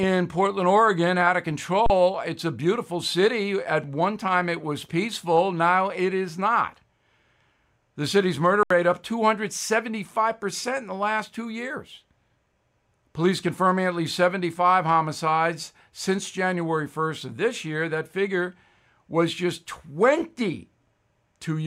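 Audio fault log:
1.86–1.90 s and 8.63–8.70 s, underrun with held sample: the output buffer ran dry twice, for 37 ms just after "out of" and for 74 ms just after "city's murder". Each time the converter froze on its last value until data returned. The waveform sits flat at that held level, so the speech drops out with almost no click at the start. It resumes after roughly 40 ms and 70 ms of live audio were lost in the meantime.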